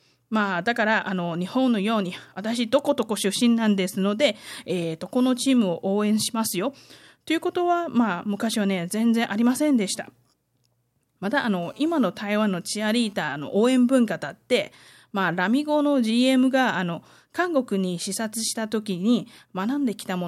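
From 11.63 to 13.13 s a hard, raspy buzz cuts in under the speech, about 30 dB below it, pulsing at roughly 217 Hz with a dense stack of harmonics and no relation to the speech. This is GSM phone buzz: a nearby 2G handset moving data sends radio bursts 217 times a second, the audio circuitry rectifies them into the signal path, and the buzz comes and goes with the transfer.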